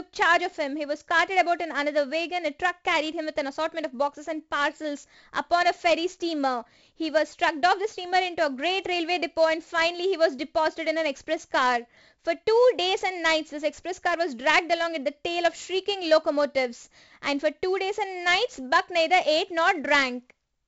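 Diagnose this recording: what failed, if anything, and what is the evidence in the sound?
The codec stage failed: the speech passed through 4-bit ADPCM compression, and the damage is heavy from start to finish. Each sample is coded as a coarse 4-bit step from a prediction, so the quantisation error becomes a gritty hiss that rises and falls with the voice and grates on every loud syllable, with crunch on sharp onsets where the step size lags. Nothing reaches above 7.8 kHz, which fits a 16 kHz sample rate and a 64 kbps stream.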